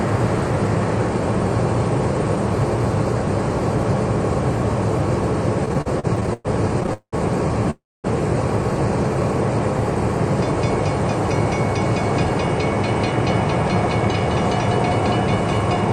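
From 5.65 to 7.14 s the audio falls into repeated stalls, a stutter of 15 short hitches. Each time, the receiver's jitter buffer ran dry because packets came late or slower than playback, and the last sound was stretched to cover the wait. About 491 ms was filled this way, roughly a third of that stretch, with the longest hold 189 ms. Nothing is lost, but the sound drags in choppy jerks.

Then at 7.70 s comes a call audio freeze that lasts until 8.06 s. Instead of many small catches, there is one single hold of 334 ms. The last sound carries on briefly as a fading buzz and then drops to silence for about 230 ms before the audio resumes exactly where it left off, now about 334 ms later than before. The cause is likely a single burst of packets held up in transit, emptying the buffer in one go.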